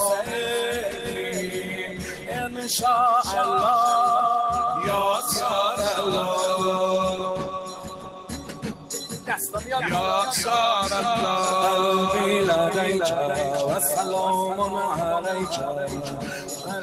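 A noise suppressor built for speech was left on this sound. It treats sustained content as noise, so the level swings by around 10 dB and the sound pumps and thins throughout. The noise suppressor also cut sound harder at 0.87 to 1.33 s (about 6 dB), 1.56 to 2.65 s (about 7 dB), 7.46 to 8.9 s (about 8 dB), 9.13 to 9.29 s (about 7 dB), and from 15.87 s to the end (about 7 dB). In these stretches held parts sink and tails die early.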